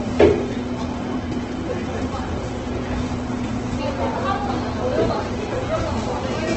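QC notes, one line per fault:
Throughout, Opus compression: nothing above about 8.2 kHz, and the remaining band sounds rough, grainy and noisy rather than swirly. This is likely heavy Opus coding in music mode, filling starved bands with folded or noise content, which fits a very low bitrate near 12 kbps.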